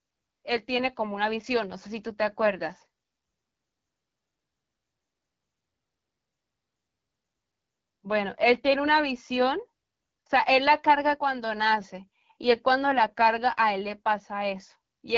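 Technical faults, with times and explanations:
Throughout, AMR wideband (HD Voice) codec: The speech sounds rough and raspy, with plainly audible coding damage. This fits a low rate near 8.85 kbit/s. The codec rebuilds speech from a pulse-driven vocal tract model and fills the top with shaped noise. Nothing remains above 7.4 kHz.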